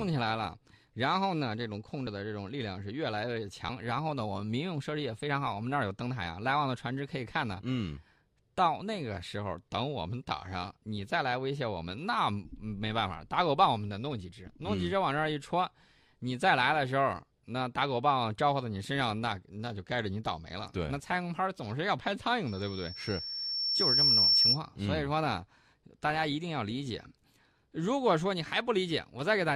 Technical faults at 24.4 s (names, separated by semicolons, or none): loudspeaker feedback squeal